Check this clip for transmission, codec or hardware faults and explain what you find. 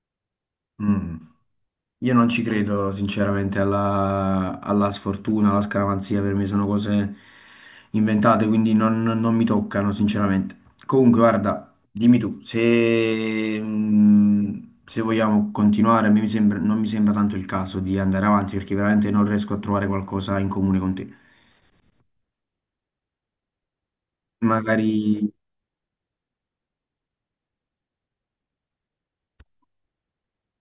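Nothing wrong turns up in the transmission, the encoding or the playback hardware of this speech recording; the signal holds steady throughout with no audible disturbance.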